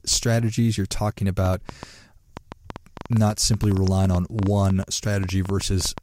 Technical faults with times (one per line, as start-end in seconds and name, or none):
1.46-5.99 train of clicks